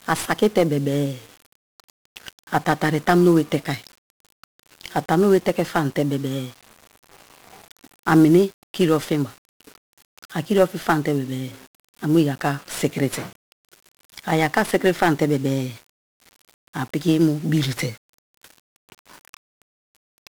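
From start to finish the speech has been through 1-bit DFPWM compression, a coder that keeps just one bit per sample to nudge an adaptive level up or down, consistent with roughly a 48 kbps stream. The heavy quantisation noise leaves everything fuzzy and crackly, with the treble sunk in broadband hiss.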